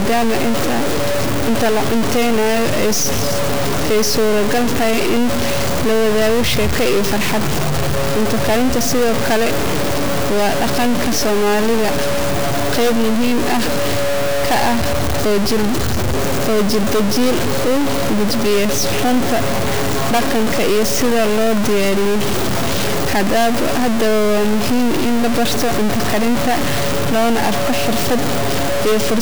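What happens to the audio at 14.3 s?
At 14.3 s the speech carries the same harsh, buzzy distortion heard across the whole clip, most likely a stuck bit: one data bit held fixed, offsetting about half the samples by a step of about -15 dBFS. Pauses fill with loud noise; the spectrogram shows broadband hash, and the waveform shows level-shifted, jagged segments.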